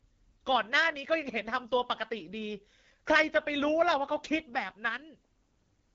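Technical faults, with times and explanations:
Throughout, AMR wideband (HD Voice) codec: rough, raspy speech with nothing above about 7.5 kHz, which fits AMR-WB's low 8.85 kbit/s mode approximating the voice with pulse-driven modelling.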